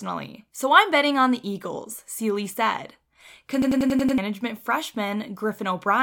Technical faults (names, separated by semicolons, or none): system hang loop